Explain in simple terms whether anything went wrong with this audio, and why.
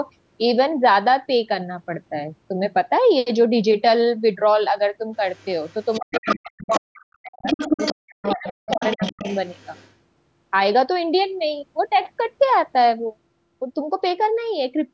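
Other side's voice leaking through, from 5.33 to 6.38, 6.61 to 7.04, 7.42 to 7.94 and 8.23 to 9.93 seconds: a second, quieter voice slips in under the main talker. The talker's device was likely playing the caller on a loudspeaker, and the echo canceller missed some of it.

Speech suppressed in double talk, between 5.98 and 9.25 seconds: the main voice repeatedly drops away, at its worst to near silence, for about two seconds in total. With both sides talking at once, the echo canceller likely couldn't separate them and turned everything down.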